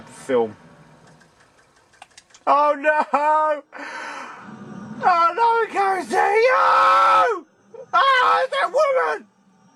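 Clock drift between sender and receiver runs through the whole clip: the sender's clock is about 2 percent slower than the receiver's, so the jitter buffer keeps draining and the receiver has to stretch the incoming audio to stay fed, leaving small timing hiccups at uneven intervals.

Repeated timing corrections follow from that drift, from 0.22 s to 9.45 s. The receiver keeps repeating short pieces, all in the same direction, so the audio plays at about 98 percent speed and gains roughly 200 ms overall.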